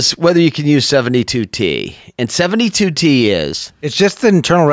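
No technical faults are audible.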